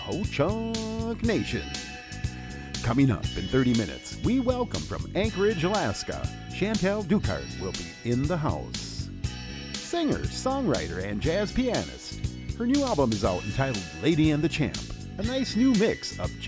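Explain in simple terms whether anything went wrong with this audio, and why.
Nothing went wrong with this audio: there are no dropouts, glitches or other faults to point to anywhere in it.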